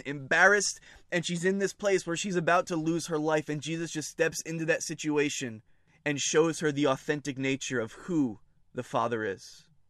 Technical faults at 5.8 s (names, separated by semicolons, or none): none